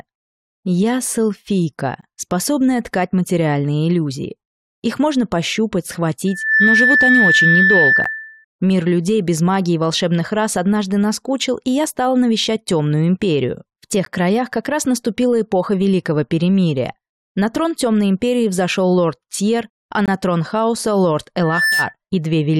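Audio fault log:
2.01, 8.04, 14.05 and 20.06–20.08 s: gap between stream segments; hard-edged silent holes of about 13–21 ms every six seconds, fitting mistimed 6-second segments. They show as flat near-silent stretches in the waveform and narrow blank vertical stripes on a spectrogram.
6.27–8.45 s and 21.41–21.94 s: loudspeaker feedback squeal; a 1.8 kHz tone swells within about a third of a second as the loop gain exceeds one there, reaching about 5 dB above the sound, then roughly equal to it. It shows as a bright horizontal spectrogram line.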